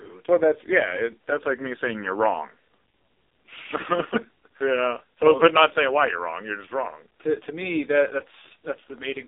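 Thin, buzzy, boxed-in speech with a synthetic, robotic edge runs through the whole clip, and nothing is heard above about 3.7 kHz or below about 300 Hz. This is AMR narrowband mobile codec damage, and it is heavy. The codec rebuilds the voice from a coarse vocal-tract model fed by a few pulses per subframe. The starved, artificial texture fits AMR-NB's lowest 4.75 kbps mode, and the band edges match a telephone line.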